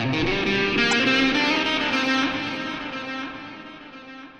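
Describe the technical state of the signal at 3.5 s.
At 3.5 s the audio is intact, with no audible fault in the signal at that moment.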